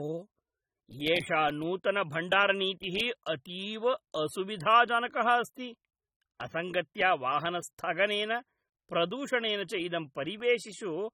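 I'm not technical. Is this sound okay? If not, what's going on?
No. The speech sounds dull and smeared from start to finish, with a fizzy, watery edge on hiss-like sounds. This is likely AAC compression, a file-shrinking step that discards detail the ear supposedly won't miss. Here it discarded too much.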